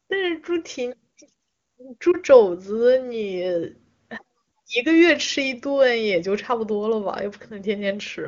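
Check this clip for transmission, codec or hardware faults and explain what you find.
One transmission fault stands out. Between 2.12 and 2.16 s the speech briefly dips or warbles before recovering. This is a lost AMR speech frame: a corrupted frame failed its checksum, and the wideband decoder filled the gap by reusing the previous pitch and vocal tract settings at reduced gain. The length fits a single missing 20 ms frame.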